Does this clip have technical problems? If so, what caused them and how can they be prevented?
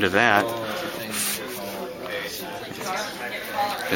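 Yes, there's a train of clicks from 0.04 to 1.11 s: about ten unevenly spaced ticks that peak around 5 dB above the sound, likely from interference by nearby equipment. Keep phones and power supplies away from the gear and cables, and reseat or swap the interface connection.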